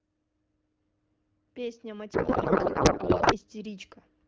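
A codec payload misread runs from 2.13 to 3.36 s in this speech clip, where the voice gives way to garbled noise and warble that barely tracks it. The decoder is reading the AMR bits with the wrong field layout, which fits octet-aligned frames being parsed as bandwidth-efficient. Outside that span the AMR wideband (HD Voice) coding sounds clear, with only light codec damage.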